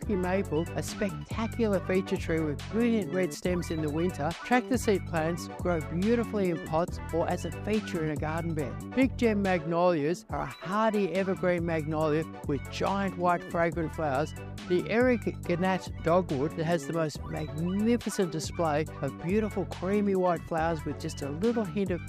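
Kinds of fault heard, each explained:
No technical faults can be heard in this recording. Nothing calls for an entry in the list of fault kinds.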